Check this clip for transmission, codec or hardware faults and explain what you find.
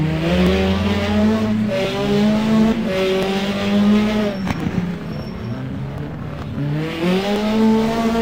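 There's one fault: clock drift buffer slips. From 0.47 s to 7.36 s, a click repeats every 1.38 s, likely from clocks roughly 700 ppm apart dropping or repeating around fifty samples each time.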